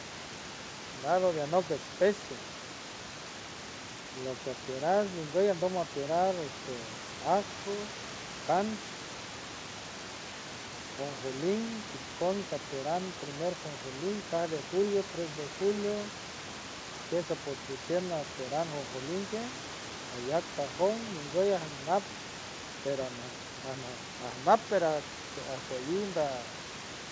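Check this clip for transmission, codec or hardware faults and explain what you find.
No transmission, codec or hardware problems are audible: the speech arrives intact, the band stops at about 8 kHz as expected of a wideband call codec such as G.722, and the room noise sits about 15 dB below the voice.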